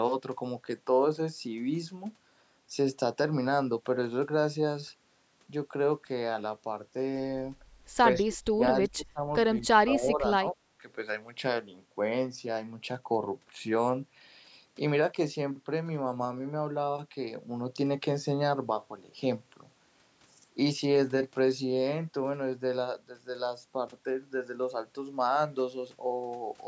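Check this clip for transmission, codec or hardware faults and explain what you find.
One fault stands out: speech suppressed in double talk at 8.23–8.63 s, 8.88–9.27 s and 9.58–10.83 s, with the sound dropping by roughly 20 to 25 dB. The likely cause is an echo canceller that, while far-end audio overlapped, could not separate this side's talker from the loudspeaker echo and turned both down at once.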